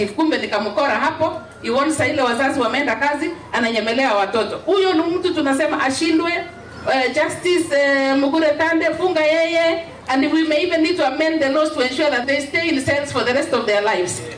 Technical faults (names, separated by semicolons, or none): none